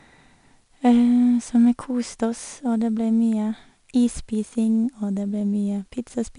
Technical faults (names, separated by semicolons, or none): 4-bit ADPCM compression